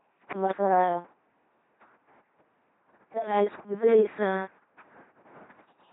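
A buzzing, mechanical robot quality runs through the whole speech clip, with stray buzz or hiss wherever voicing is misjudged and nothing above 3.8 kHz. This is the LPC-10 vocoder at 2.4 kbit/s: each frame is rebuilt from a pulse train or noise through a short all-pole filter, causing heavy damage.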